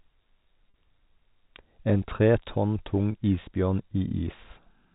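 At 0.70 s there's a 40 ms dropout, and at 3.12 s, right after "tre tonn tung", another of 20 ms, which fits two lost 20 ms packets and then one. Both are packet loss with pitch repetition: the receiver fills each gap by replaying the last pitch period, so you hear a brief held, slightly buzzy smear instead of a hole. The G.711 telephone band stays intact around both gaps.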